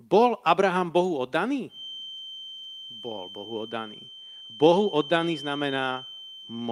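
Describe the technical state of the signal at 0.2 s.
At 0.2 s the signal is intact, with nothing wrong at that point beyond the ordinary coding character of the call path it travelled through.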